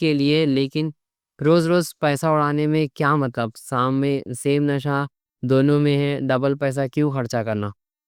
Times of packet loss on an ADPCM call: none

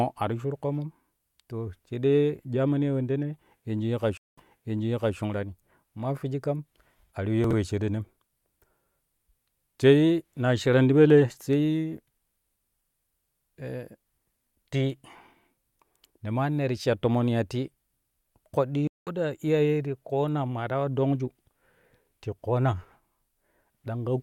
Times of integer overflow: none

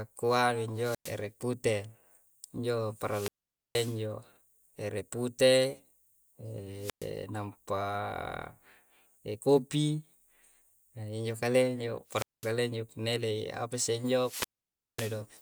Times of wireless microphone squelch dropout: 0.71-1.27, 2.99-4.04, 6.77-7.12, 12.08-12.55, 14.15-15.25

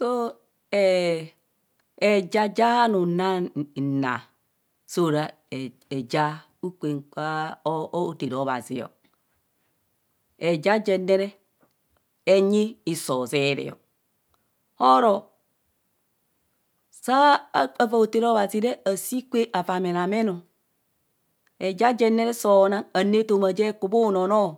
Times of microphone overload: none

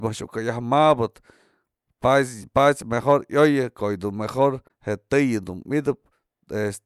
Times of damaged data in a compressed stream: 1.64-1.66, 4.64-4.71

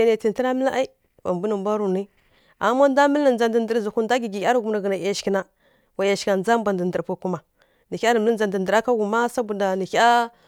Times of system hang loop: none

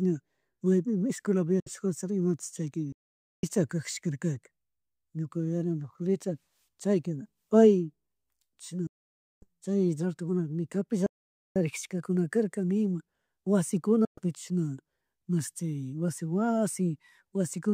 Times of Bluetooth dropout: 1.60-1.71, 8.87-9.45, 14.05-14.19

